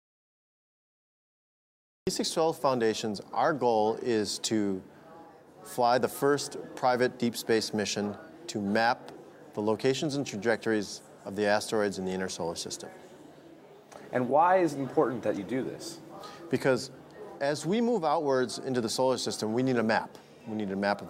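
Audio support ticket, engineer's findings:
Audio dropout to silence, 0 to 2.07 s, already under way when the clip begins: silent, no room tone; likely input loss (disconnected device or stray mute) while recording continued.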